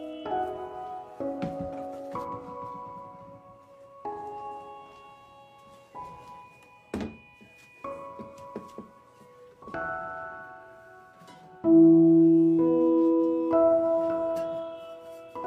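No technical faults are audible.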